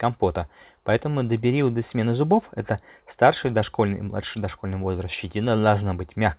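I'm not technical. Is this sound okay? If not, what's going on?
Yes, this speech sounds fine: it has the narrower, phone-call quality of audio sent over a call line, but nothing stood out as a problem on listening.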